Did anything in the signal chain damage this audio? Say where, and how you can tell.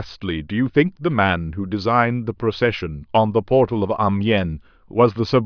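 No, nothing in the signal chain damaged this recording.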